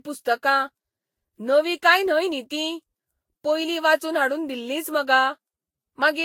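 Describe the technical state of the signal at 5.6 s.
At 5.6 s the speech sounds swirly, smeared and hollow, with blurred attacks and nothing above 16.6 kHz. This runs throughout and is likely generation loss, roughly seven lossy re-encodes, fitting Vorbis near 55 kbit/s.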